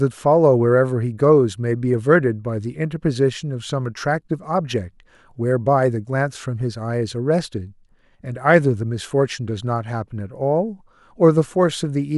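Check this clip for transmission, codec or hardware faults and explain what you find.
Checking the clip turns up no faults to explain.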